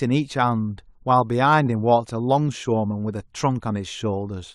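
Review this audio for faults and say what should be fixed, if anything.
Nothing in the speech needs fixing; no faults can be heard anywhere in the recording.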